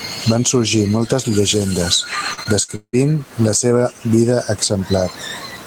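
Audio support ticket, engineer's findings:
Gain pumping, whole clip: loud and soft parts pulled closer in level, sound squashed, level swinging around 15 dB. Likely cause: input gain set far too high, with a fast limiter or compressor clamping it down on every peak.

Repeated packet loss (robotic sound), 2.33 to 2.95 s, ending just before "la seva vida": choppy stretch with pieces missing, four dropouts, longest 172 ms. Network transport losing packets repeatedly; concealment stretches the last audio over each hole, covering just under half the span. Room noise sits about 38 dB below the speech.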